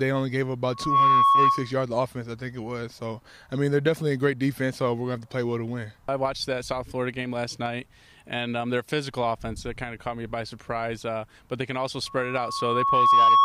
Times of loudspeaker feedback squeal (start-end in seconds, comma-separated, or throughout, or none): 0.71-1.73, 12.06-13.44